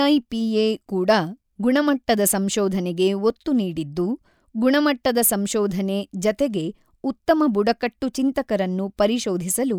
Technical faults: none

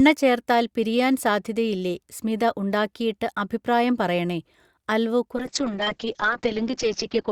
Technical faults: call bitrate drop

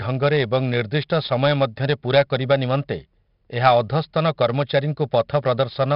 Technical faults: 4-bit ADPCM compression

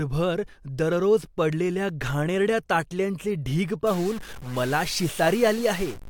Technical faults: stuck bit

